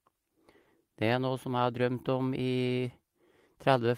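Clock drift between sender and receiver runs through the whole speech clip: the sender's clock is roughly 4 percent slow, so the receiver's jitter buffer keeps draining. Repeated timing corrections follow from 0.30 to 3.87 s, with short pieces repeated to add roughly 100 ms, slowing delivery to 97 percent speed with faint, uneven hiccups. A short stall from a late packet occurs at 0.62 to 0.70 s: the buffer ran empty, so the last sound was stretched by 50 ms, heard as a held sound with a slight buzz or dip.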